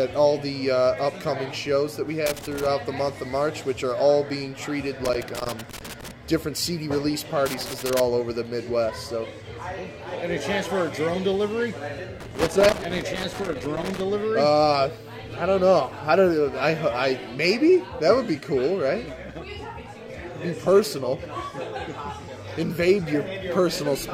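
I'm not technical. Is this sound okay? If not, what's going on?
No. There's loose connector crackle at 2.3 to 2.7, 5.0 to 6.1, 7.5 to 8.0 and 12.2 to 14.0 seconds. A worn plug keeps losing contact, causing scratchy bursts.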